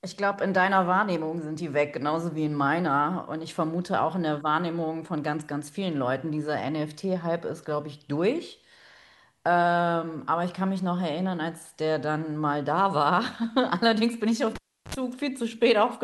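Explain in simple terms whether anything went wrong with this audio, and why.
At 14.55 to 14.95 s, a cable pulled and plugged in: pops around a third-second gap, plus a brief 50 Hz buzz that a plain dropout lacks.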